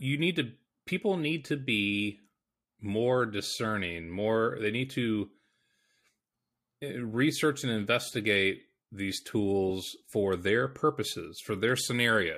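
A short chirpy burst of noise cuts into the speech from 9.68 to 9.71 s, right after "and investigate these" and before "for their", peaking around -30 dBFS. This is a corrupt frame decoded: damaged bits in roughly two compressed frames were played anyway, so misread codes put energy at the wrong frequencies.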